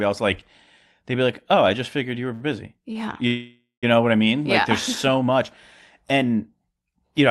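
At 2.33 s, right after "just figured you were", a packet arrived late and the jitter buffer ran dry. The receiver stretched the last sound for about 71 ms, a short stall from a late packet heard as a held, faintly buzzy sound. A second, shorter stall of about 23 ms follows at 2.93 s.

From 3.27 to 3.85 s, packets were likely held up in transit, emptying the buffer again. This call audio freeze fills about 554 ms: the last sound is prolonged as a fading buzz and then about 140 ms of silence, before the audio resumes with "know what I".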